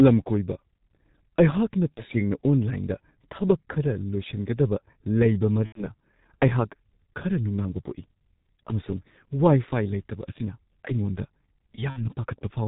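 Throughout, the G.723.1 codec at about 6.3 kbit/s leaves the speech muffled and hoarse, with a spectrogram empty above 4 kHz and smeared consonants. VoIP packet loss concealed by the speech codec hits at 1.94–2.03 s (30 ms lost), 5.66–5.84 s just after "ꯂꯣꯏꯁꯤꯟꯒꯗꯕ ꯂꯩꯕ" (90 ms), and 11.90–12.10 s (60 ms). Each gap becomes a fading buzzy tone or coloured noise that shows as a shrinking waveform with smeared, repeated harmonics.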